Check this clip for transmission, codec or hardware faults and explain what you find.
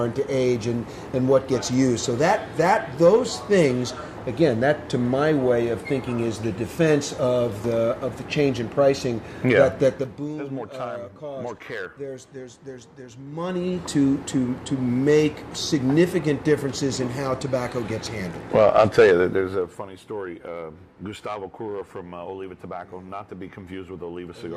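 Zipper noise occurs at 9.88–10.32 s, 13.24–13.84 s and 19.24–19.92 s, as the level falls, rises, then falls by about 15 dB. The gain jumps in unsmoothed 2 dB steps, roughly twenty a second in the first two and fifteen in the last, so each jump ticks. The waveform shows a staircase envelope, and the spectrogram shows faint vertical lines at every step.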